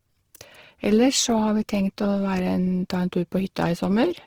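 From start to finish the speech carries a grainy, rough texture, with upper harmonics turned to a hiss-like fizz rather than clean detail. This is likely Opus compression running in its music-oriented CELT mode at a starved rate, which fits something near 16 kbps. The band energy is held across the full bandwidth, so the top stays present but noisy. Unlike MP3 damage, there is little swirling or watery warble.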